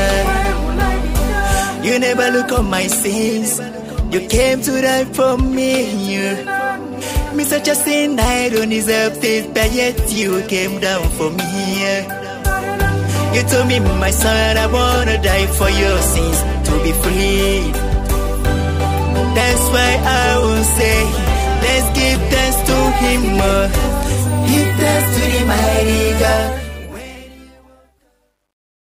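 From 26.30 s to the end, truncation distortion on the fade-out: the level stage keeps about 11 bits without dither, so from 27.39 s the tail turns gritty.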